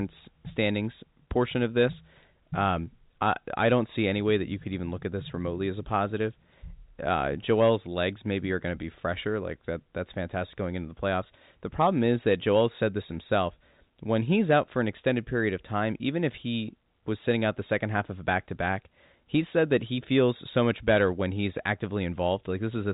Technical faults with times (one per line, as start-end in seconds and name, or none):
none